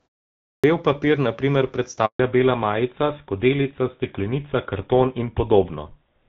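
At 0.54 s, after about half a second of silence, the first sound arrives with its onset missing: a clipped start after a pause. The output device had gone idle and took about 96 ms to wake and lock, so the sound begins abruptly, mid-attack, out of silence.

From 2.05 to 2.19 s the sound dies away and leaves a 140 ms hole, a handover gap. The call was being passed between networks, and no speech frames arrived during the switch, so that stretch is simply lost rather than concealed.

From 2.19 s to the end, the call falls back to narrowband. Before the gap, the light coding character fits AMR-WB at 12.65 kbit/s. Afterwards nothing is present above 4 kHz, and the duller, rougher sound fits GSM full rate at 13 kbit/s.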